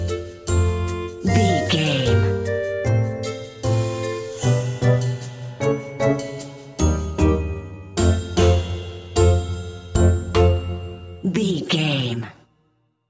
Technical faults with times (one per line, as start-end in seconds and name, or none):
none